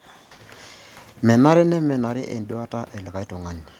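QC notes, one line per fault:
1.58 to 3.73 s, automatic gain rising: after the talker drops back at the mic around 1.5 s, level falls about 12 dB, so the gain control slowly pushes up by about 5 dB over two seconds, lifting voice and room noise together in one gradual swell.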